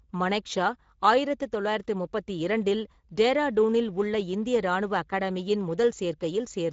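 Throughout, the speech sounds plainly coded and grainy, with nothing above 7.7 kHz: Speex codec damage, a sparse CELP encoding at a mid-rate setting near 17 kbps.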